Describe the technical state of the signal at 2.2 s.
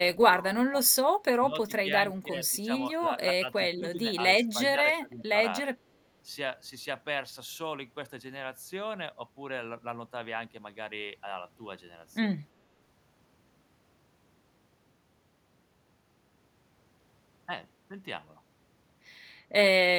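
At 2.2 s the speech is suppressed in double talk. From 2.21 to 2.69 s the voice dips, with about a third of a second of it turned down in total. At its deepest the level falls by around 10 dB. The likely cause is an echo canceller meeting both sides talking at once. It could not tell this talker from the loudspeaker echo, so it pulled both down.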